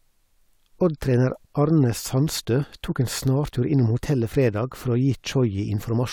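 Nothing in this recording trips the ear as a fault: no dropouts, glitches or distortion turn up anywhere along it.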